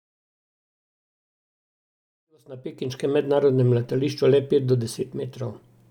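Nothing goes wrong in this speech recording; the only thing worth noting is the gentle fade-in that begins around two and a half seconds and reaches full level at about 3.48 s, smooth and without any click.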